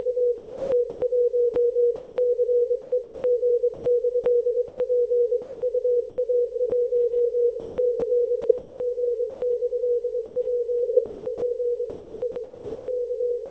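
From 0.38 to 6.72 s, 7.60 to 9.42 s and 10.26 to 13.51 s the sound turns choppy. About 1.56 s, 0.56 s and 1.2 s are lost, likely sound chopped by the voice detector and replaced with comfort noise. The call path's audio stops at 8 kHz.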